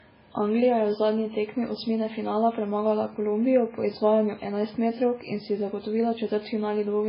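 Throughout, the speech sounds muffled and watery and is empty above 5.3 kHz. This is likely low-bitrate audio saved at a high bitrate, with the earlier MP3 losses intact.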